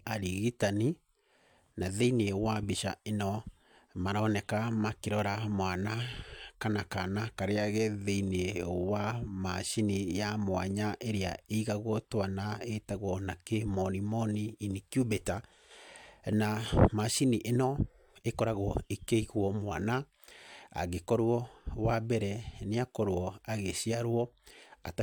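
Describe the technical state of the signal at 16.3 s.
At 16.33 s, an overlap between stream segments, where joining 6-second segments discarded about 12 ms of real audio, makes the speech waveform jump, heard as a tiny skip.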